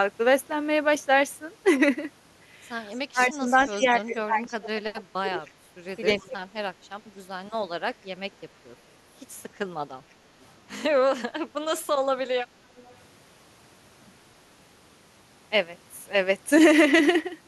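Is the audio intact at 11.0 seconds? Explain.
Yes, the audio is intact at 11.0 seconds, with no audible fault at that moment.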